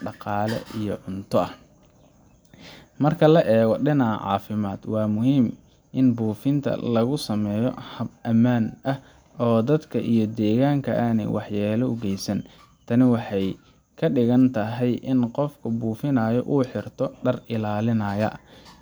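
No technical faults can be heard anywhere in this speech recording.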